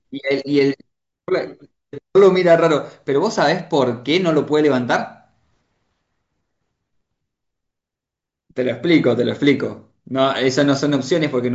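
No audible faults: the speech holds steady throughout with no dropouts, clicks, distortion or timing breaks.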